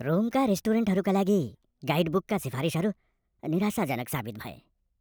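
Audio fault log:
throughout: wrong sample rate, speech 1.38 times faster and 5.55 semitones higher, fitting 32 kHz audio played at 44.1 kHz; spectrogram harmonics raised, waveform squeezed.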